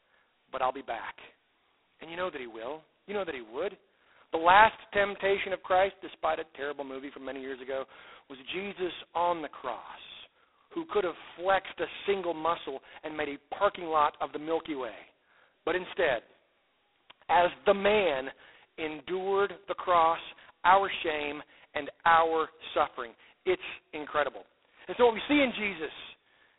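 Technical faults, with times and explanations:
Throughout, G.726 ADPCM: the speech carries a harsh, rasping hiss that rises and falls with its level. The sound is confined to a narrow telephone band of roughly 300 Hz to 3.6 kHz, with nothing above 3.9 kHz. Each sample codes only a small difference from an adaptive prediction, so the coarse steps leave a gritty error that follows the signal. The heavy damage fits G.726's lowest, 16 kbit/s mode.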